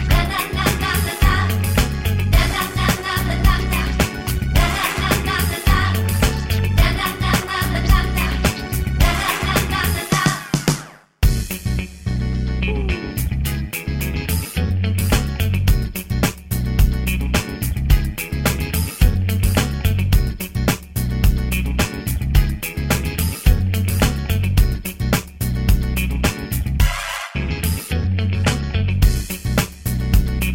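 Throughout the clip, overlap-add ripple makes the level pulse by about 6 dB at around 100 Hz, heard as a metallic buzz. Windowed frames were rejoined with an overlap that doesn't sum evenly, so the waveform envelope shows regular periodic scalloping and the spectrogram shows vertical banding at each frame.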